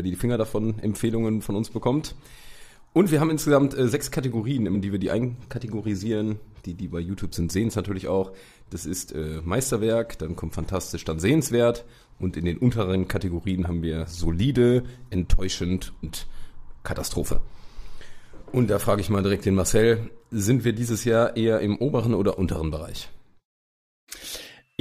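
Damaged data in a compressed stream shows up twice in this audio, as brief blips at 4.74 s and 16.02 s, each lasting under 20 ms. At those points part of the encoded data is wrong, so the decoder misreads or rejects the affected frames, loses its place in the stream and has to hunt for the next valid frame header. That brief gap in correct decoding is heard as a short chirp, squawk, click or hole before decoding resumes.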